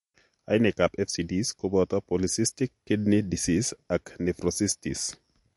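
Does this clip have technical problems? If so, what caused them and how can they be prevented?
Yes. The speech sounds watery throughout, with nothing above 11.3 kHz. That's likely MP3 compression running short of bits and dropping the treble and weaker detail, which fits a bitrate near 48 kbps. Encode at a higher bitrate, or keep a lossless master and compress only copies.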